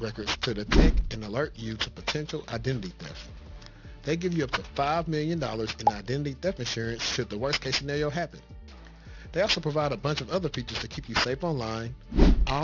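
From the start right through to the end there's aliasing. Someone dropped the sample rate without low-pass filtering first, so everything above the new limit folded back down around 6 kHz into unrelated frequencies. The band edge points to a drop from 48 kHz to 12 kHz. The folded energy sits not far under the real content, so the top end sounds gritty and metallic, with the spectrum crowding hard against that 6 kHz ceiling.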